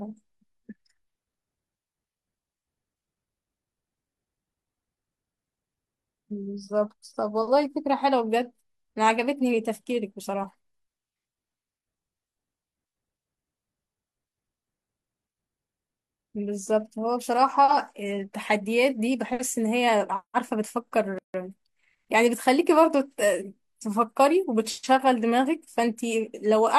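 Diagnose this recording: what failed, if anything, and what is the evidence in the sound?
The failure sits at the codec stage: a gap at a join of encoded pieces. From 21.18 to 21.34 s the speech drops into a gap of about 157 ms and then carries on exactly where it stopped. On a waveform this shows as a flat, near-zero stretch with steep edges, softened by the codec. On a spectrogram it is a clean vertical blank band across all frequencies. The segments were encoded separately and joined untrimmed, so each one's start-up delay and final-frame padding remain.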